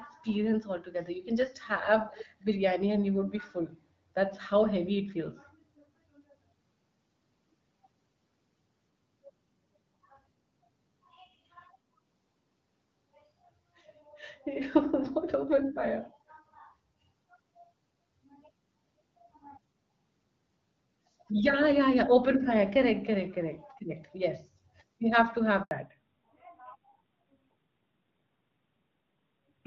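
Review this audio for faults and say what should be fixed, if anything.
Between 2.11 and 2.26 s there's a faint delayed copy of the speech, trailing by about 243 ms and sitting roughly 15 dB down. That's most likely an echo leak, where a far-end speakerphone's echo canceller let some of the signal back. Better far-end echo cancellation or a headset would stop it.

At 25.63 to 25.71 s the sound cuts out for 80 ms. That's a handover gap: the call hopped networks and nothing arrived until the new link came up. Tuning handover timing or buffering across the switch would prevent it.

From 25.71 s to the end there's a fallback to narrowband. Everything above 4 kHz disappears and the speech goes duller, which suggests the call dropped from HD Voice to narrowband AMR. Keeping HD Voice supported on both networks would prevent the downgrade.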